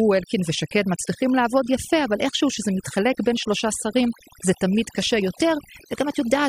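Overdone noise removal runs through the whole speech clip, from start to finish. A noise reduction stage was pushed too hard, so any frequency band that dips close to its noise estimate gets cut deeply or muted outright, and the softer parts of the voice are treated as noise too. Between phrases the background drops away and breaks up into twinkling, chirpy specks.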